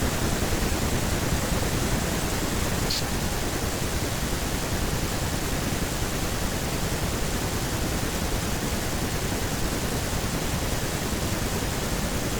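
Nothing in this recording stood out as a technical fault on listening.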